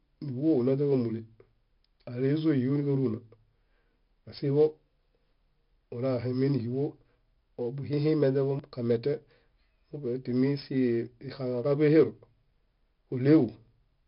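From the start, the speech carries heavy 4-bit ADPCM compression: each sample is a coarse step from a prediction, so a gritty hiss rides every loud syllable and attacks smear. Nothing survives above 5.3 kHz, which fits a rate near 44 kbps. A spectrogram shows level-tracking noise filling gaps below a hard ceiling.

From 8.59 to 13.68 s, periodic USB or driver dropouts skip roughly 10 ms of audio every 1.01 s, about seven times in all. They are heard as ticks where they fall on speech. The waveform shows evenly spaced splice jumps, and the spectrogram shows thin vertical broadband lines.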